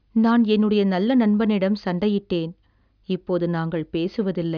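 No technical faults can be heard in this recording.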